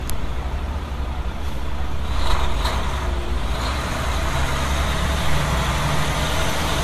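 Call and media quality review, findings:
Mains hum, 0.00 to 4.69 s: steady 60 Hz tone with low harmonics, about 15 dB below the signal, then it stops. Probable component: ground loop or nearby transformer in the capture path. Spectrogram: thin horizontal line at 60 Hz plus faint multiples, ending abruptly at 4.69 s. Waveform: slow periodic ripple under the signal.

Generation loss, whole clip: swirly, smeared, hollow texture, softened attacks, no content above 14 kHz. Likely cause: repeated lossy re-encoding, about four passes, consistent with an AAC-LC chain around 64 kbit/s. Each pass requantises on a shifted frame grid, so noise and holes compound. Spectrogram: hard ceiling at 14 kHz, patchy time-frequency holes, blurred transients.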